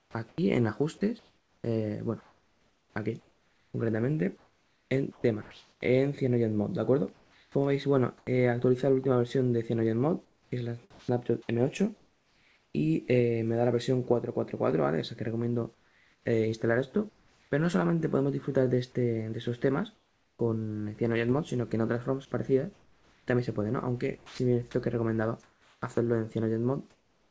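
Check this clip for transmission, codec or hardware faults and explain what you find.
Two faults recur, both from a call's voice-activity switching. The sound is band-limited with nothing above 8 kHz, as a G.722 call codec gives.

Sound chopped by the voice detector: 0.0–5.81 s, 10.25–12.74 s, and 22.73 s to the end. The sender likely toggled transmission repeatedly. About 3.0 s, 1.3 s and 1.6 s were replaced by synthetic fill. Quiet edges drop out.

Comfort noise in place of the background: 7.13–8.27 s, 15.74–17.51 s and 19.94–20.39 s. Transmission likely paused during silence. The receiver substituted generated noise for the real background. It sounds steady and featureless. At 19.94 s it is about 5 dB quieter.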